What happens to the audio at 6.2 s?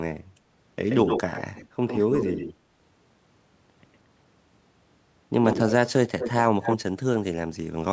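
An echo leak runs from 6.19 to 6.31 s: a delayed copy of the speech surfaces about 214 ms behind the original, only a little quieter than the direct signal, so it sounds like a short, close repeat layered over the talker. The likely cause is a far end playing the call on a loudspeaker whose echo canceller failed to remove everything its microphone picked up, letting that residue travel back down the line.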